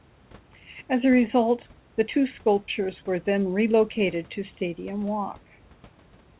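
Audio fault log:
No faults heard anywhere in this speech recording.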